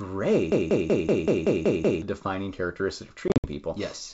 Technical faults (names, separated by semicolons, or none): broken-record loop; packet loss on an ADPCM call